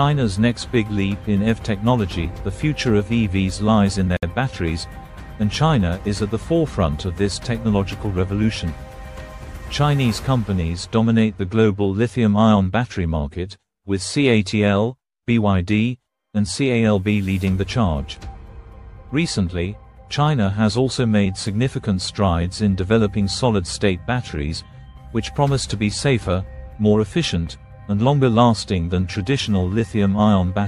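At 4.17 s the sound drops out. It returns at 4.23 s. This is a gap at a join of encoded pieces, a gap of about 60 ms. Two separately encoded sections were joined without trimming. The encoder's start-up delay and the padding of the last frame both stayed in. The edges of the silence are smeared by the codec. Afterwards the sound picks up exactly where it stopped, with nothing missing.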